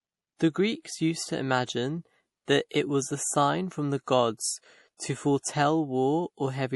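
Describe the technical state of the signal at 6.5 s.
At 6.5 s the speech carries plainly audible MP3 compression damage, present across the whole clip rather than at that moment alone. The spectrum stops dead at about 11.5 kHz, and the band below sounds watery and swirly, with metallic chirps on s sounds and smeared consonant attacks. This is likely a bit-starved MP3 encode, consistent with a bitrate near 48 kbps, where the encoder cuts the treble and drops weak frequency lines that switch on and off between frames.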